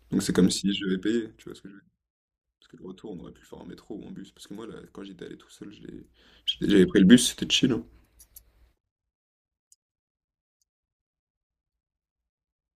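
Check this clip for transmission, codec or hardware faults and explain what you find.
The clip has one hardware-type fault, zipper noise, heard twice as the speech level moves.

Zipper noise from 0.4 to 1.76 s and again from 5.76 to 6.76 s: the gain drops by roughly 20 dB, then rises by roughly 20 dB, in unsmoothed 1 dB steps at around thirty per second. Each step clicks, producing a fine ticking rasp over the speech.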